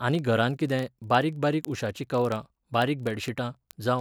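A receiving device running on its own clock, unlocked from the sender's, drifts by roughly 700 ppm, so one sample is dropped or repeated about every 40 ms. From 0.12 s to 3.99 s the speech carries word clock ticks, around a hundred sharp, steady clicks.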